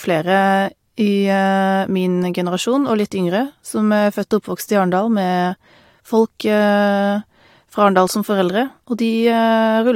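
No technical fault can be heard anywhere in the speech recording; the signal holds steady throughout.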